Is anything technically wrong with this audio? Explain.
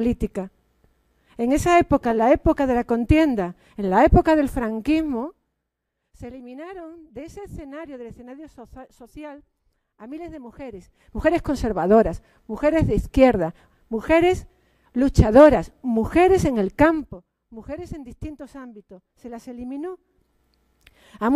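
Yes, there is zipper noise during four level moves: 5.02–5.76 s (down about 20 dB), 10.68–11.19 s (up about 20 dB), 16.81–17.18 s (down about 15 dB) and 19.88–20.43 s (up about 15 dB). The gain jumps in unsmoothed 1 or 2 dB steps, about twenty per second, so each jump clicks and the move sounds like ticking. The waveform envelope looks like a staircase, and vertical lines appear on the spectrogram.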